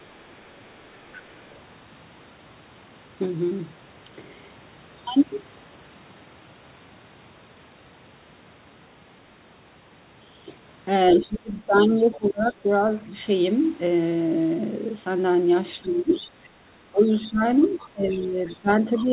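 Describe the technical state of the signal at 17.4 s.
At 17.4 s the talker's speech is pulled down, dipping by around 15 dB at its deepest. This speech suppressed in double talk runs from 15.82 s to the end, likely an echo canceller that couldn't separate near and far talkers and attenuated both.

A second voice is also audible at 17.4 s, faint, roughly 20 dB below the talker. This other side's voice leaking through runs from 17.21 s onward, likely loudspeaker echo that the canceller didn't fully remove from the microphone.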